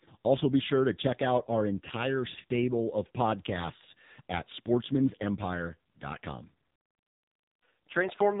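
Speech squeezed through the AMR narrowband mobile codec the whole way through: nothing above about 3.8 kHz, and a heavy buzzy, synthetic edge that fits a low 5.9 kbps mode.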